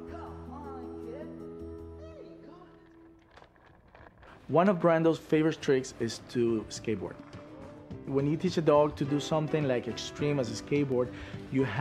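Three isolated clicks occur at 2.12 s, 6.11 s and 10.92 s. Each is a single sharp tick with no gap in the audio around it, and each shows as a thin vertical line across the spectrum. The likely cause is dropped samples: a fraction of a millisecond of data goes missing, so the waveform jumps straight from one value to a later one. That step discontinuity produces the click, while the loss is far too brief to remove any audible sound.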